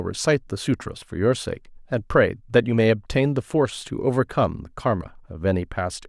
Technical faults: none

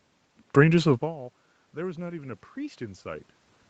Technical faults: automatic gain rising

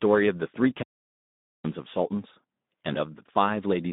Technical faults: Speex codec; audio dropout to silence

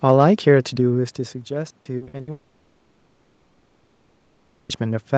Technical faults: repeated packet loss (robotic sound); long network dropout

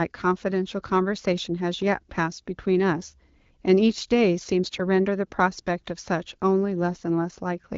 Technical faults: AMR bit errors

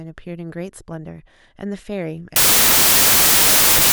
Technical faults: wrong sample width

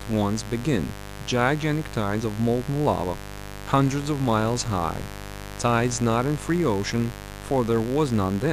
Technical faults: mains buzz

